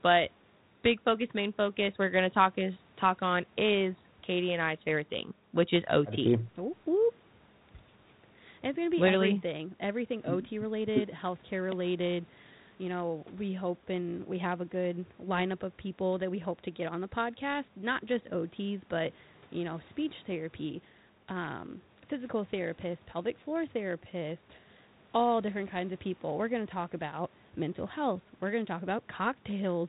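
No faults; the speech is carried by G.726 ADPCM at 32 kbit/s, with the expected telephone band ending near 4 kHz and only a light coding grain.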